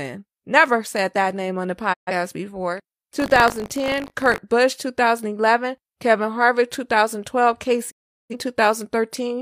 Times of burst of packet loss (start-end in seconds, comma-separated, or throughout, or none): none